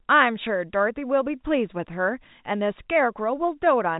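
No faults are audible in this telephone-band speech.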